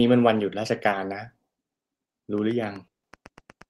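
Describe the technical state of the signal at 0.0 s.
At 0.0 s the speech signal is intact, carried through the WebRTC call path with its ordinary Opus coding at around 20 kbps and the top end rolled off near 12 kHz, and no fault is present.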